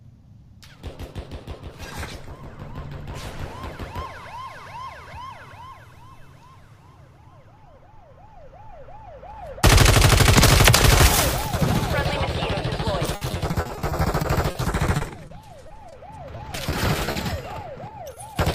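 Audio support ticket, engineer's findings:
Repeated packet loss (robotic sound), 13.15–17.18 s: choppy stretch with roughly two dozen dropouts, gaps up to 60 ms. The receiver's concealment keeps extending the last sound, covering about 14% of the span.

Short concealed packet loss, 18.15–18.19 s: brief smear where about 20 ms never reached the decoder. The receiver continued the preceding sound to fill the hole, then blended back into the real audio.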